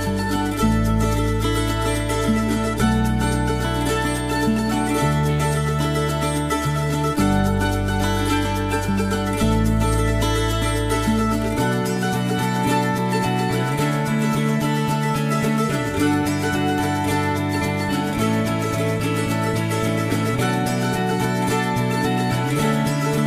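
No technical faults occur at any point in the recording, so there is nothing to describe in time order.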